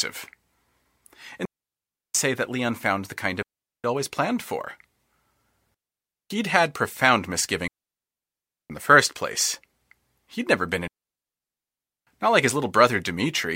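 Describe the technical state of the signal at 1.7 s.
At 1.7 s you're right in the middle of a digital wireless dropout running from 1.45 to 2.15 s. The receiver lost too much data and muted for about 0.69 s, so the speech just drops into a clean hole of near silence, no noise burst either side.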